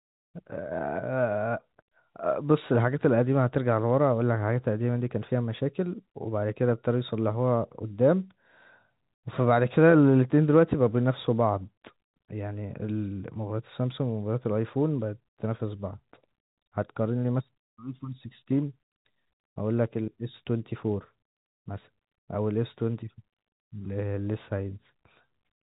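No faults heard in the speech; band-limited telephone sound topping out near 3.8 kHz, consistent with ordinary 64 kbps G.711 mu-law telephone coding working as designed.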